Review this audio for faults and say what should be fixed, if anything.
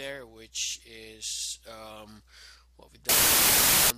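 From 3.09 to 3.90 s the audio collapses into noise with the original sound buried underneath, playing at 0.75 times its proper speed and correspondingly lower in pitch. This is a wrong sample width fault. The stretch was read with a different number of bytes per sample than it was written with, which fits 32-bit integer data being read as packed 24-bit. Most values are therefore built from mismatched bytes, and only some keep the top bits of the real signal. A plain sample-rate mismatch would also change speed and pitch, but it would leave the sound clean. Here the noise comes together with the slowdown, which points to misframed bytes rather than a wrong clock. To prevent it, carry the sample format explicitly with the data and check it wherever audio is read back.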